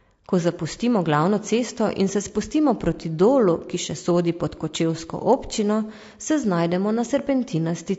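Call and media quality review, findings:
Low-delay AAC compression, throughout: rough, grainy speech, noise between harmonics, dulled top band. Likely AAC-ELD short frames smearing pitch structure; damage fits a low bitrate near 32 kbps.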